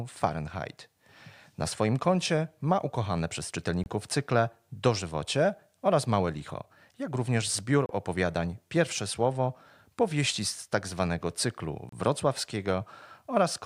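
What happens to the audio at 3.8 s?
Separately encoded pieces of the speech were joined without trimming the encoder's start-up delay and end padding, leaving a gap at a join of encoded pieces. From 3.84 to 3.86 s, right after "koncie ma ukochane przez", the sound drops out for about 25 ms. The codec smears the edges of the silence, and the speech then resumes where it stopped. The joins fall every 4.0 s.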